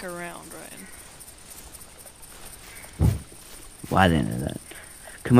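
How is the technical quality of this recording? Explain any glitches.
The recording has one glitch, present throughout. Crude rate conversion, fitting nearest-sample conversion from 48 kHz to 44.1 kHz, adds inharmonic fizz roughly 25 dB down. Unlike clipping, it follows loud and high content, not just peaks.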